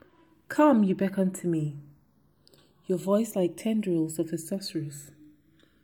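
From start to finish the two channels are drifting apart: they seem to come off separately clocked devices, roughly 100 ppm out, so the gap between them creeps up to about half a millisecond. Fold it to mono and the comb notches sweep slowly, giving a slow flanging swirl.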